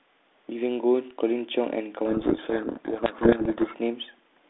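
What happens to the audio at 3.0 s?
At 3.0 s the speech is in the middle of a codec payload misread lasting from 2.06 to 3.76 s. The G.726 decoder is unpacking its code words with the bits in the wrong order, so every sample difference comes out scrambled, burying the speech in harsh, grinding distortion. A spectrogram shows dense noise smeared across the telephone band, up to about 3.6 kHz, with formants and harmonics blurred away. The waveform turns into a thick, jagged block.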